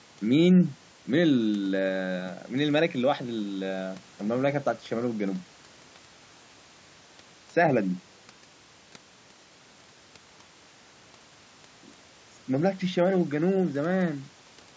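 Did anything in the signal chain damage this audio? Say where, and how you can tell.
No, the signal chain leaves no audible damage.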